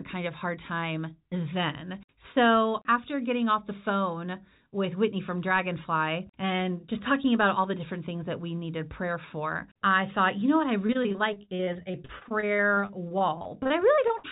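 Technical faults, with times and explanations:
10.82–14.31 s, repeated packet loss (robotic sound): Right after "you know what I", packets on the call path begin going missing or arriving too late, again and again until the clip ends. Each gap is covered by stretching the last bit of sound, and the next gap arrives before the speech can recover. The result is choppy speech with pieces missing, all inside a band that stops at 4 kHz, which fits a G.711 telephone codec.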